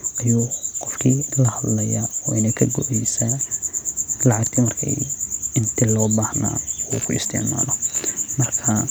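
From 6.92 s to the end of the speech at 8.91 s, computer activity noise appears: a buzzy, chirping pulse train at roughly 70 Hz, about 25 dB below the speech. Processor or graphics load is shifting the audio ground, so on a spectrogram it shows as evenly spaced vertical striations unrelated to the speech.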